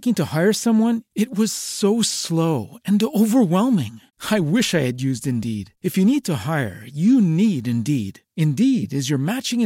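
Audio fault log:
No audible faults anywhere in this speech recording.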